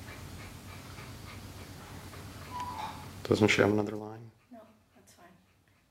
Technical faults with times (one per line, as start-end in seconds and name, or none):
3.62-4.09 zipper noise